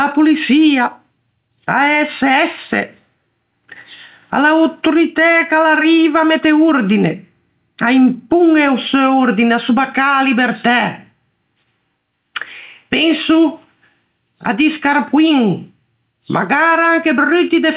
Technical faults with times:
0.00-17.77 gain pumping

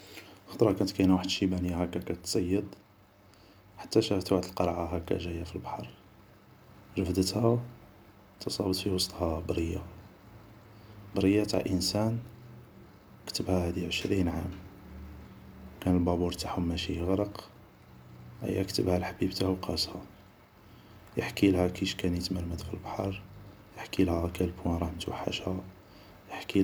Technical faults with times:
none

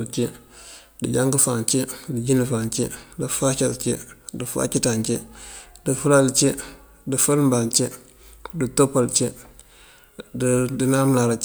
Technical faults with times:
none

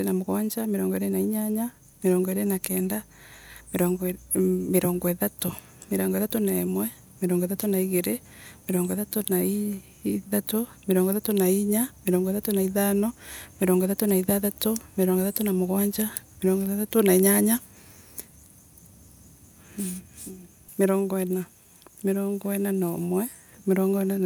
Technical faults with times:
none

